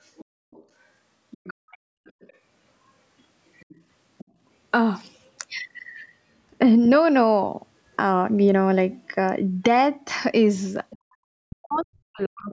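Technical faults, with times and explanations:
0.05–0.64 s, 1.31–2.33 s, 3.57–3.81 s, 4.18–4.25 s, 10.9–10.98 s and 11.75–11.83 s: other side's voice leaking through. A second, faint voice sits under the speech, about 20 to 30 dB down. It is loudest at 1.31 s. Likely the far end's loudspeaker sound was not fully cancelled at the microphone.
11.38–12.52 s: speech suppressed in double talk. The talker's speech dips and drops out in pieces, by about 40 dB at its deepest, across roughly a second. A leak at 11.75 s overlaps it. Likely the echo canceller turned everything down while both sides spoke.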